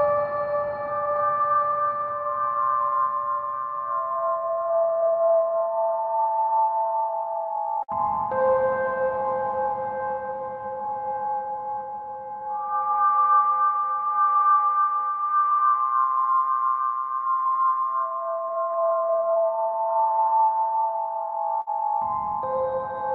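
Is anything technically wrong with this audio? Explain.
Yes, the audio has several timing faults.

Clock drift between sender and receiver runs throughout: the sender's clock is roughly 4% slow. The receiver keeps re-syncing, and the waveform's timing drifts unevenly.

Repeated timing corrections run from 0.01 to 21.58 s. Short pieces are repeated, playing at 97% speed and adding around 0.7 s. This is heard as a slightly dragging, unsteady tempo, with duplicated waveform segments.

Scattered short gaps occur at 0.87–3.79 s, 6.79–9.88 s and 15.01–18.77 s. Late or lost packets were patched by extending the previous sound, which causes brief ticks or smears. The longest patch, roughly 50 ms, falls in the middle span and shows as a short, frozen spectral stripe.

A short stall from a late packet occurs at 21.61–21.70 s. The buffer emptied and the last sound was held for 59 ms. It is heard as a held sound with a slight buzz or dip and appears as a flat, smeared spectrogram band.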